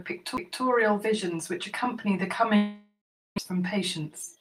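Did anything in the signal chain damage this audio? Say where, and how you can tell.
Yes. At the playback stage, a CD skip at 0.37 s: the laser jumped tracks, giving a brief mute of roughly 10 ms, then the speech resumes from another point on the spiral just before "visions which accompany the".

On the network, a long network dropout from 2.56 to 3.40 s, just after "visions which accompany the", likely from lost packets. The receiver filled about 820 ms: the last sound carries on as a fading buzz or hiss, then about 360 ms of silence, and about 700 ms of speech never returns.

In the jitter buffer, a speed-up from 3.5 s to the end: a surplus of queued audio was trimmed by cutting short pitch-period pieces repeatedly, so the speech runs about 6% fast at unchanged pitch and sounds hurried.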